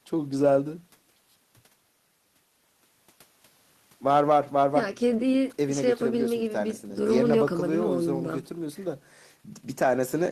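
No technical faults can be heard anywhere in the recording; the signal stays continuous and steady throughout.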